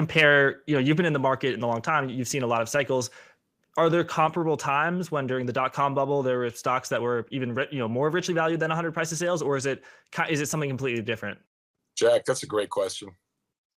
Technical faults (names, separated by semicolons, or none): microphone overload; microphone volume stepped down